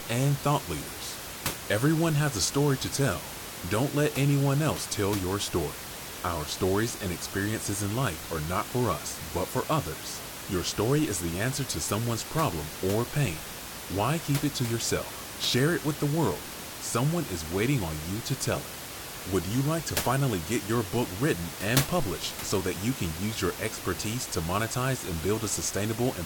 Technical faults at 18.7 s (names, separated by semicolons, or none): none